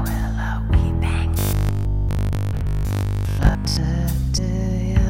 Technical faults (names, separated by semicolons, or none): robotic sound from repeated short buffers; compressed frames skipped